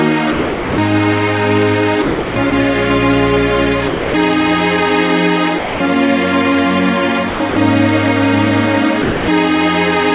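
At 0.32–0.78 s, 2.02–2.36 s, 2.5 s, 3.88–4.14 s, 5.58–5.8 s, 7.3–7.4 s, 7.5–7.56 s and 9.02–9.28 s, the sound gives way to flat, steady noise, then returns. This is likely sound dropped by the voice detector. The sender judged it background and stopped sending, and the receiver played comfort noise instead. Over the G.711 A-law line, nothing reaches above 4 kHz.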